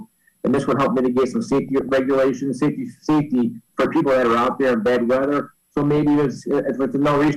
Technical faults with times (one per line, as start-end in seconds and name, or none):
1.69-1.89 DAB burbling
5.97-6.07 DAB burbling